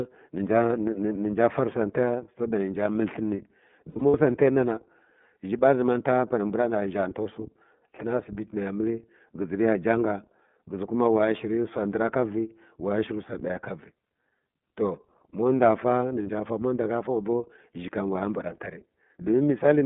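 Throughout, the speech sounds boxy and a little rough and synthetic, with nothing below about 150 Hz or above 3.6 kHz. This is the iLBC codec, a narrowband VoIP coder whose plainly audible damage fits its 13.33 kbps mode with 30 ms frames, each coded independently.

From 3.9 to 4.15 s the speech turns into brief held, buzzy vowel-like stretches, about 150 ms of missing audio scattered over 240 ms, the longest run around 70 ms. A single 30 ms gap of the same kind follows at 16.23 to 16.29 s. These are lost iLBC frames. The decoder repeated the last pitch cycle blended with noise, and since each frame stands alone, the voice returns almost immediately after each gap.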